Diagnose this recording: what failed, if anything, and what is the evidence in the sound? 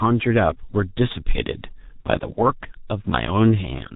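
G.723.1 codec damage runs through the whole speech clip and belongs to the codec stage. Nothing above 4 kHz survives, so the speech is muffled, and the heavy coding leaves it hoarse, with consonants smeared together. The coder models the voice in 30 ms frames and updates that model slowly, so quick changes in the voice are lost. The thin, rough texture suggests a bitrate near 6.3 kbit/s.

VoIP packet loss concealed by the speech codec appears from 2.33 to 2.38 s and originates at the network stage, with the repair done in the decoder. For about 30 ms, which matches one lost 30 ms frame, the sound is stretched out and fades. Having no new data, the decoder repeated its last pitch and filter at falling gain. Because each frame builds on the previous one, the speech stays weak or distorted for tens of milliseconds or more after the packets return.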